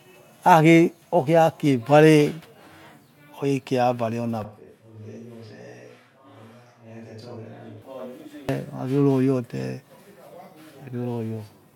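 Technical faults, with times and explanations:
4.45–7.82 s, switch to a distant microphone: speech turns suddenly roomy and thin, roughly 10 dB quieter, with more background noise. A farther microphone likely replaced the close one.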